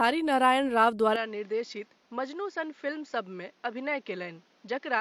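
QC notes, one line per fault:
1.16 to 5.01 s, input switched to a poorer device. At 1.16 s the speech abruptly loses its top end. Nothing remains above 7.1 kHz, so it sounds duller and boxier. The level falls by about 10 dB. A new background noise appears, roughly 35 dB under the speech. There is no gap at the change. The likely cause is a mid-recording switch to another microphone or a headset call profile, whose narrower band, different level and own noise persist to the end.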